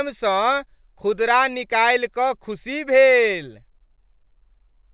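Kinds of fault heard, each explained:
No faults can be heard.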